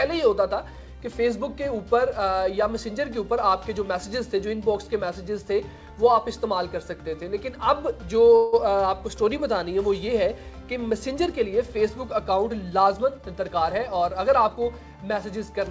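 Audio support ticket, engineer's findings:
Call audio freeze, 8.36–8.55 s: 167 ms fading buzz or hiss, then audio resumes with nothing lost. Likely jitter buffer underrun. Spectrogram shows a smeared, decaying band, no silent gap.

Jitter buffer speed-up, 12.72–14.57 s: hurried pace at 109% speed, same pitch. Buffer trimmed pitch periods, roughly 150 ms in total. Spectrogram shows events spaced closer together.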